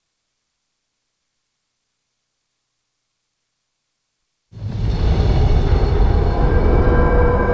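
Nothing here stands out as a technical fault, and the only thing worth noting is that the audio has come through a call path, with nothing above about 8 kHz, which fits a wideband call codec.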